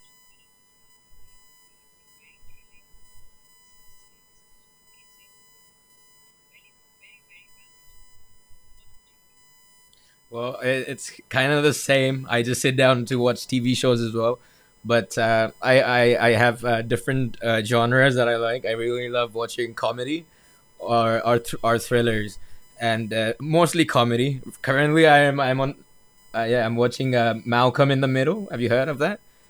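From start to finish the speech carries a USB whine. Current drawn in the bus's 1 ms frames leaks into the audio through power or ground, giving a fixed-pitch tone at 1 kHz with a harmonic series whose strongest component sits near 19 kHz, roughly 35 dB below the speech. Its exact 1 kHz spacing sets it apart from mains hum, which is built on 50 or 60 Hz.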